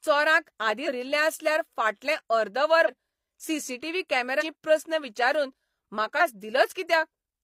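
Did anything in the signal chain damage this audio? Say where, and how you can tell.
Yes, at the codec stage: compressed frames skipped at 0.83–0.88, 2.84–2.89, 4.37–4.43 and 6.17–6.22 s, just before "आसल्यार फाटलें" and "प्रस्न विचारून". Each is a forward jump of roughly 150 to 300 ms, which fits whole frames of about 43 ms that were lost.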